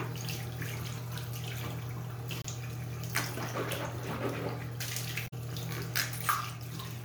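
A clip of sounds with two short glitches from damaged data in the compressed stream, at 2.42 to 2.46 s and 5.24 to 5.34 s. Each time, corrupt frames throw the decoder out of sync while it hunts for the next valid frame header, leaving a brief glitch.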